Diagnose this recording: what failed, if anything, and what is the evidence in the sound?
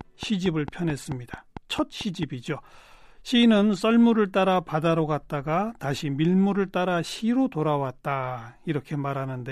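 A train of clicks runs from 0.01 s to 2.24 s, with about ten clicks at a regular 4.5 per second, reaching about 5 dB above the speech level. The stage is likely the analogue path, where a pulse from nearby equipment, a faulty connection or a power supply couples in repeatedly. The clicks ride over the speech and the pauses alike. On a spectrogram they form evenly spaced thin vertical broadband lines; on a waveform they appear as narrow, similarly shaped spikes.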